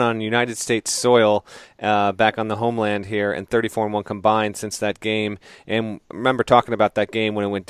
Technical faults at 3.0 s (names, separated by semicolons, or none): none